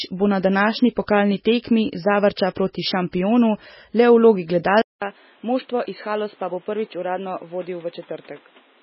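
Speech recording, most likely passed through a heavily starved MP3 encoder for its full length, at a bitrate that fits roughly 16 kbps. With so few bits, the encoder discards weak frequency lines and cuts everything above 5.6 kHz. The result is heavy MP3 compression damage: a watery, swirling texture as detail flickers in and out between frames, metallic chirps on sibilants, smeared consonant attacks, and a dull top end. At 4.82 s the input switches to a poorer device, probably another microphone or a headset's call profile, and it stays there until the end. A 200 ms silence marks the switch. After it the band narrows further, with nothing above 4.4 kHz. The level drops by about 10 dB, and a new noise floor appears around 30 dB below the signal, so the second half sounds duller, boxier and quieter than the first.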